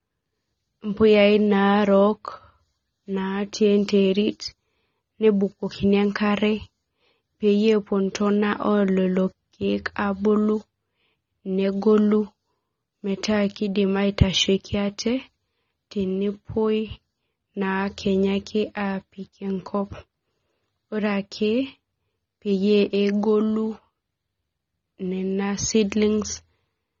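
A speech recording carrying AAC compression damage from start to finish: the sound is dull and smeared, with a warbling, fizzy texture on sustained vowels and sibilants, and nothing is present above 7 kHz. That hard ceiling and the plainly audible artefacts point to heavy AAC-LC coding, which fits a low bitrate around 24 kbps. On a spectrogram, energy stops abruptly at 7 kHz, while the waveform looks unremarkable.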